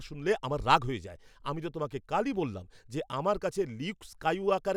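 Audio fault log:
No faults detected in the speech audio.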